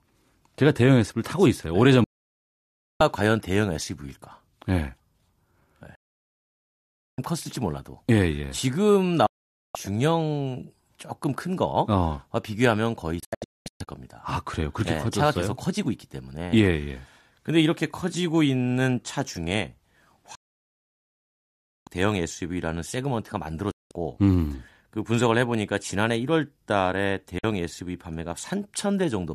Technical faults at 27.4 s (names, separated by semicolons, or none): digital broadcast dropout